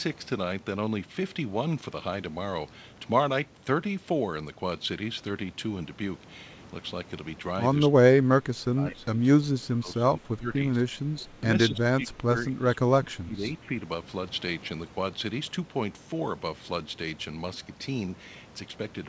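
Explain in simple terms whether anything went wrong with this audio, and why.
Between 7.88 and 13.75 s the speech repeatedly sinks and breaks up. Short dips come at 7.88, 11.4 and 13.61 s, a mild one at 10.75 to 11.16 s, and deep cuts at 8.12 to 10.51, 11.68 to 12.32 and 12.52 to 13.44 s. This is speech suppressed in double talk, likely from an echo canceller that heard both sides talking at once and turned this talker down along with the echo. The call codec carries nothing above 8 kHz.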